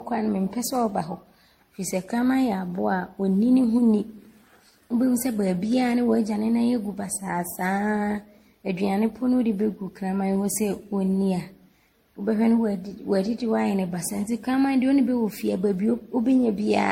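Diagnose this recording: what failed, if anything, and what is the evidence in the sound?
Codec stage. The speech sounds swirly, smeared and hollow throughout, with nothing above 16.5 kHz. Likely generation loss from roughly ten 64 kbit/s MP3 re-encodes.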